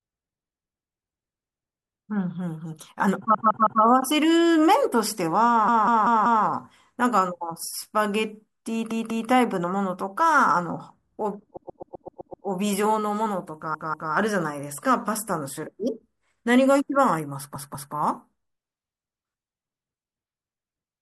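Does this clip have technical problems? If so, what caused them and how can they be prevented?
Yes. Repeated frames: a short run of compressed frames was written or sent more than once, so the decoder plays the same slice of speech back to back. It stutters at 3.34–3.82 s (a 160 ms block heard three extra times), 5.68–6.45 s (192 ms, four extra), 8.91–9.30 s, 13.74–14.13 s and 17.55–17.94 s (192 ms, two extra each), and 11.57–12.46 s (128 ms, seven extra), with the speech lengthened by the repeats. Checking frame sequence numbers and dropping duplicates before decoding would prevent this.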